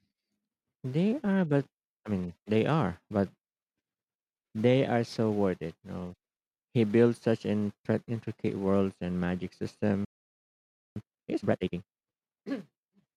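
At 10.05 s the speech cuts off mid-flow and the output stays silent until 10.96 s, a gap of about 0.91 s. This playback stall was likely caused by the player running out of buffered data or having its audio thread blocked.

From 10.96 s to 11.86 s the player works off its backlog with time-compressed catch-up, removing short segments and cross-fading across the joins. Speech runs at twice normal speed but keeps its original pitch.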